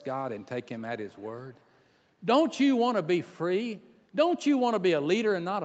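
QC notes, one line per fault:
1.0–1.25 s, echo leak: a very faint copy of the speech trails 256 ms behind it for a quarter of a second, likely sound from the far side's loudspeaker that its echo canceller failed to remove from the microphone pickup and sent back down the line.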